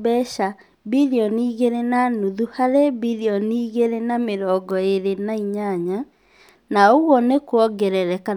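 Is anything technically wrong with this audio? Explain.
Yes, there are two bit error spikes, at 4.71 s and 6.49 s. A flipped bit makes a sample or two jump by a power of two and snap straight back, so each one is a sharp broadband tick, about -20 dBFS and -26 dBFS, that has nothing to do with the speech.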